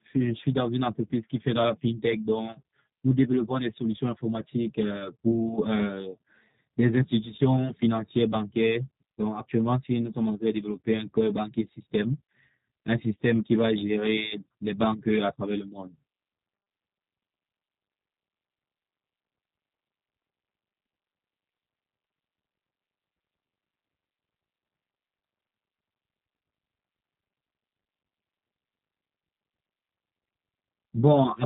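From start to finish the speech carries plainly audible G.729 codec damage. Each 10 ms frame is resynthesised from a vocal tract filter, a pitch predictor and a few pulses, so the sound is rough and slightly synthetic. Nothing passes above 3.8 kHz, which fits an 8 kbit/s G.729A stream.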